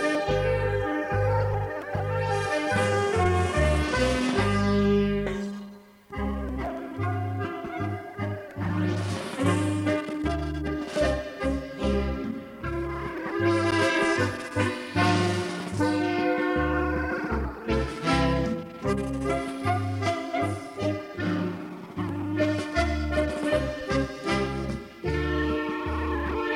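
Nothing stood out on listening; no technical fault could be heard anywhere in the clip.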